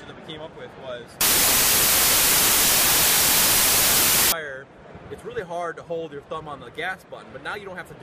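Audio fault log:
1.21 to 4.32 s: samples built from the wrong bytes. For about three seconds the sample values are assembled incorrectly, as if the reader were offset by a byte, had the byte order reversed or expected a different alignment. The rapidly varying low-order bits end up in the most significant position, so each value is effectively random and the passage turns into loud, harsh broadband noise, close to white on the louder sounds.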